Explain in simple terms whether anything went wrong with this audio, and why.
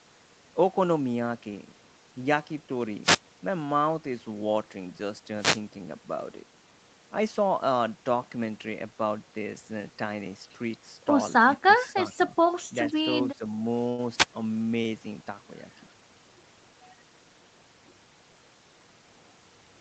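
Wireless microphone noise hits occur at 3.02–3.20 s, 5.31–5.67 s and 14.16–14.26 s. Each is a short burst of static as the radio signal fades.

The speech dips sharply for a fraction of a second at 11.57–11.67 s, 11.94–12.00 s and 13.38–13.44 s. This is likely speech suppressed in double talk, where the echo canceller turned down the talker while the other side spoke.

At 13.89–14.00 s there is a short stall from a late packet. The receiver held the sound for about 90 ms until the packet arrived, and nothing was lost.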